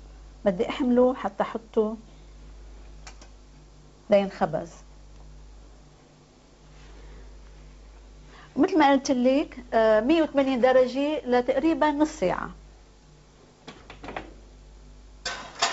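No faults are audible; the audio has passed through a call path whose wideband codec leaves nothing above 8 kHz, consistent with G.722 at 64 kbps.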